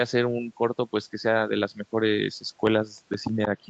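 CD scratch ticks run from 2.67 to 3.45 s: six short clicks, the longest lasting only a few milliseconds, spaced at roughly six or seven a second. Each marks one revolution of the disc past a blemish that destroyed more data than error correction could rebuild, so the player patched or muted those few samples. Heard through the call path's 8 kHz bandwidth, they come as a brief, rhythmic patter of ticks over the speech.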